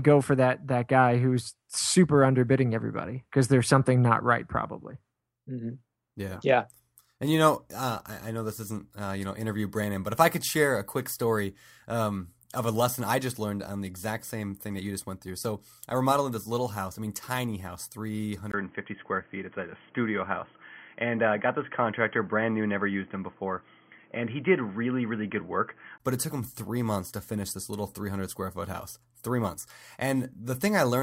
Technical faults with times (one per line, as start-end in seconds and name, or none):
18.52-26.00 input switched to a poorer device